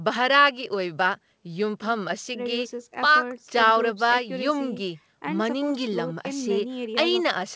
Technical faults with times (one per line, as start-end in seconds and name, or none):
none